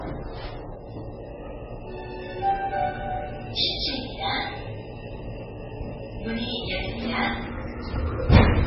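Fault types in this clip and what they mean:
Low-bitrate audio saved at a high bitrate: Nothing is heard above 5.6 kHz throughout. This likely comes from a very low-bitrate MP3 later re-encoded at a high bitrate.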